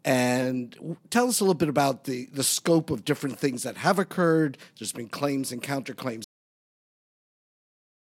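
At 6.24 s the recording has a cut-off end: the final stretch of audio buffers was never written out or played, so the stream simply stops partway through. The speech breaks off mid-sound rather than finishing or fading, and the level drops straight to digital silence with no natural decay or room tail. That dead silence runs for the remaining 1.9 s or so, which makes the ending sound abruptly truncated rather than complete.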